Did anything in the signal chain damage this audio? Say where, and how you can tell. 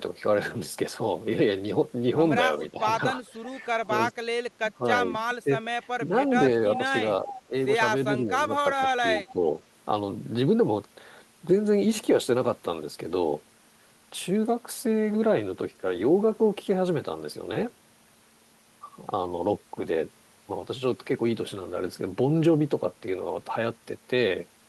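Yes. The damage is in call processing. Speech suppressed in double talk shows as brief level dips of about 5 to 10 dB at 2.71–4.14, 4.77–6.14, 6.78–7.53, 8.07–8.54 and 9.3–9.47 s. The cause is likely an echo canceller mistaking overlapping talk for echo and attenuating both.

An echo leak also sits in call processing: at 7.34–7.42 s a faint copy of the voice returns about 354 ms late, roughly 15 dB below the speech. It is likely a loudspeaker end whose canceller let part of its microphone pickup back through.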